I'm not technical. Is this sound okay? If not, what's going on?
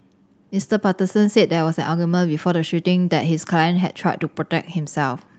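Yes, there's nothing wrong with this sound.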